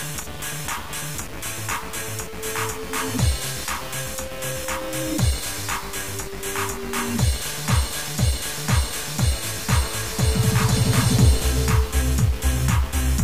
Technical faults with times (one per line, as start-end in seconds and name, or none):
0.00-13.23 low bit depth without dither